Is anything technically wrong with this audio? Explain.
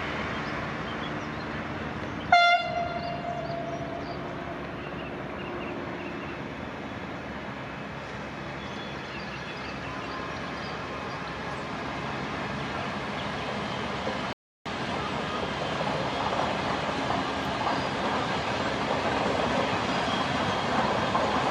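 Yes. At 14.33 s the sound abruptly drops into dead silence, holds there until 14.66 s, then picks up precisely where it broke off, with nothing skipped or repeated. This is a rebuffering stall: playback consumed all the audio it had downloaded and had to wait for more data before continuing. Because the player paused rather than dropping anything, the content is intact, but the gap adds about 0.33 s to the running time.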